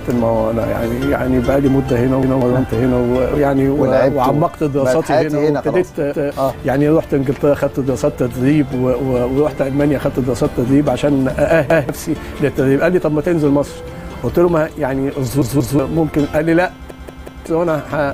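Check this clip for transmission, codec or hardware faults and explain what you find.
There's one problem here, a repeated buffer, and it happens five times. At 2.23–2.42 s, 6.13–6.32 s and 11.70–11.89 s a chunk of about 186 ms plays once more. At 15.42–15.79 s it plays twice more, and at 16.90–17.46 s three more times. Fresh audio didn't arrive in time, so the device replayed its last block, which fits an 8192-sample buffer. You hear a stutter with a hard join at each repeat, and roughly 0.2 to 0.5 s of the real audio is skipped each time.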